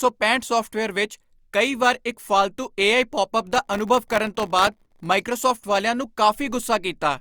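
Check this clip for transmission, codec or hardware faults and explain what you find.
One fault is present: processor overload crackle from 3.52 to 5.06 s in the speech. The processor fell behind and missed around a hundred buffer deadlines. The very short buffers, well under a millisecond each, point to a tight low-latency setting. Each missed buffer was filled with silence, leaving a tiny hard-edged gap. Packed closely together, those dropouts produce a gritty, tearing crackle over the speech for about 1.5 s. It stops once the load eases.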